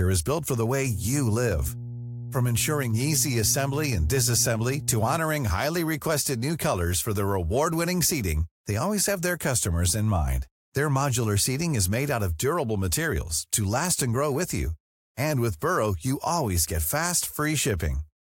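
From 0.86 s to 5.18 s, mains hum sits under the speech: a steady low tone at 60 Hz, roughly 10 dB below the speech level. Power-line current has leaked into the signal path, through a ground loop or from a nearby transformer. On a spectrogram it shows as a thin, unbroken horizontal line at 60 Hz that starts and stops abruptly at those times. In the waveform, a regular low-frequency ripple rides beneath the speech.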